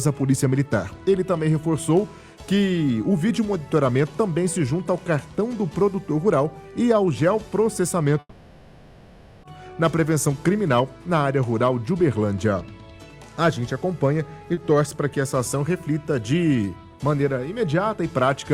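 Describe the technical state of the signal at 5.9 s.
At 5.9 s the signal is intact, with no dropout, distortion, glitch or other audible fault at that moment.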